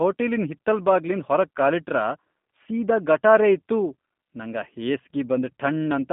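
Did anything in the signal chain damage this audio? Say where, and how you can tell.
Yes. Throughout the speech the sound is rough and faintly synthetic, with nothing above about 3.6 kHz or below about 150 Hz. That points to the codec stage: G.729 coding, which fits an 8 kbit/s VoIP link, rebuilds each frame from a filter, pitch predictor and sparse pulses.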